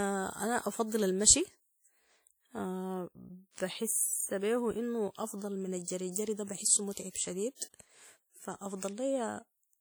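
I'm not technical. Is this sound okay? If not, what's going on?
No. The recording was squeezed down by a file-shrinking method, most likely WMA compression, which throws away detail it judges unimportant. That leaves the speech sounding washy and ringing throughout, with a hiss that swells and fades along with the talking.

The same squeezing causes pre-echo. The codec smears noise backwards in time ahead of sudden sounds, so a brief hiss arrives before each sharp start: at 6.11 s, lasting about 47 ms, just before "ده بحسه"; then at 6.93 s and 7.10 s, lasting about 41 and 56 ms, after it.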